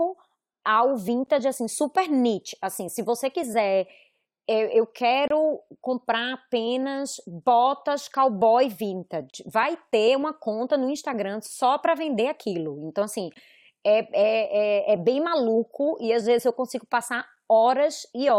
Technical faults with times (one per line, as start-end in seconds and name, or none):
1.26 gap between stream segments
5.28-5.31 gap between stream segments
9.30-9.34 gap between stream segments
13.34-13.36 gap between stream segments